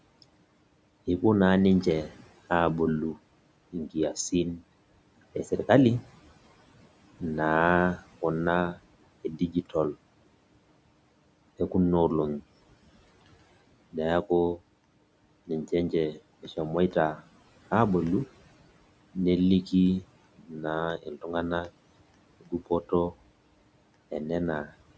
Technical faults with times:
9.24-9.74 speech cut by the noise suppressor
20.38-20.65 speech cut by the noise suppressor
20.97-21.26 speech cut by the noise suppressor
22.41-22.71 speech cut by the noise suppressor

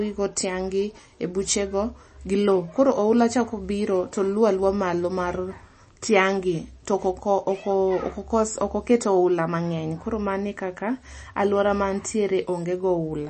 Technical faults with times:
0.00-13.29 MP3 compression

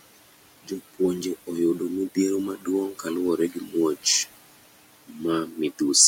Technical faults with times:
0.00-6.08 noise suppressor artifacts
2.57-2.67 speech cut by the noise suppressor
3.37-3.75 speech cut by the noise suppressor
5.07-5.20 speech cut by the noise suppressor

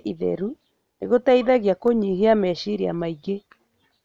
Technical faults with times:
1.88 electrical switching spike

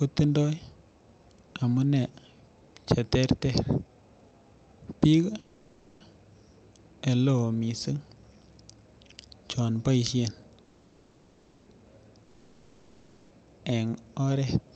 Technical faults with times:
5.39-6.02 call audio freeze
10.64-11.68 call audio freeze
12.24-13.32 long network dropout

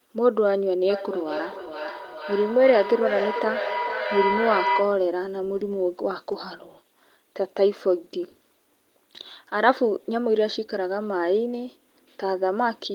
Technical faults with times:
0.89-5.12 feedback howl

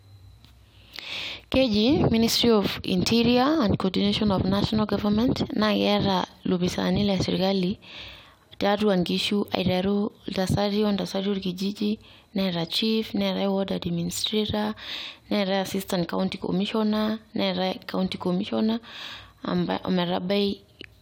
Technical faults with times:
none

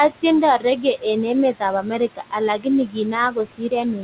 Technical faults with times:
0.00-4.03 noise suppressor artifacts
0.58-1.06 speech cut by the noise suppressor
1.82-4.03 speech cut by the noise suppressor

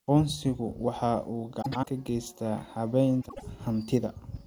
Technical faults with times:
1.61-1.87 frames out of order
3.21-3.43 frames out of order

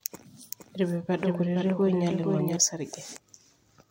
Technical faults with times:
0.51-2.57 doubled audio track

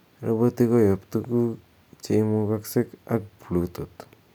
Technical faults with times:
none

